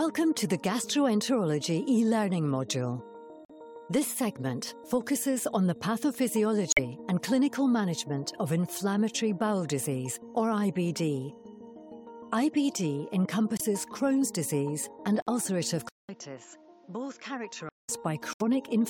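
Abrupt dropouts at 3.45, 6.70, 13.57, 15.22 and 18.33 s, each 56 to 88 ms long, are corrupt frames muted: the decoder rejected damaged compressed frames and silence replaced them. From 15.89 to 17.89 s, after a 200 ms gap, the audio turns dull and about 10 dB quieter, cut off above 7.6 kHz, with a noise floor roughly 35 dB down, likely an input switched to a poorer device.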